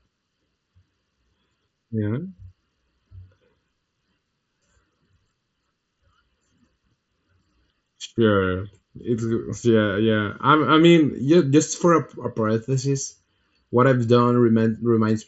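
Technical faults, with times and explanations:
Throughout, channel delay (comb filtering): hollow, phasey speech, as one channel lags by under a millisecond and summing to mono cuts evenly spaced notches from about 700 Hz.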